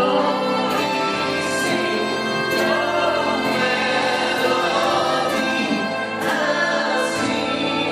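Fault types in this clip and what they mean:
Periodic USB or driver dropouts: a recurring stall in the USB bus or audio driver skips a tiny fraction of a millisecond of sound with no fill, about every 1.02 s from 0.95 s to 7.09 s, giving roughly seven evenly spaced ticks over the signal.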